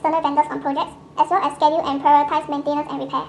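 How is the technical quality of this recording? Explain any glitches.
The whole speech clip plays back too fast, about 1.5 times normal speed. Throughout, that's a wrong sample rate: it plays faster than it was recorded with no conversion, consistent with 32 kHz audio run at 48 kHz, so voices come out roughly seven semitones higher and noticeably hurried.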